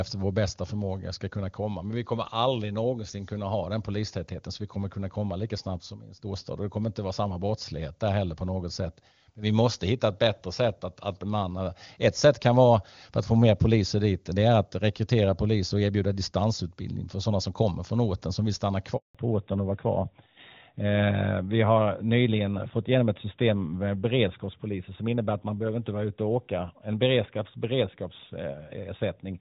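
A speech recording on a mobile call, with two linked faults around 19 s. Right after "orten som vill stanna" there is a handover gap from 18.97 to 19.15 s: the voice collapses within a few tens of milliseconds and the line stays silent for 180 ms. The call was being passed between networks, no speech frames reached the receiver during the switch, and whatever was said in that window is gone rather than merely muffled. From 19.15 s to the end, the clip shows a fallback to narrowband. The wideband sound of the first part, clean and consistent with AMR-WB around 23.85 kbit/s, is replaced by a band-limited signal with nothing above 4 kHz. The loss of sibilance and upper presence makes the voice duller, and it also gets rougher. This points to the new link negotiating an older narrowband codec, most likely AMR-NB at its 12.2 kbit/s top rate.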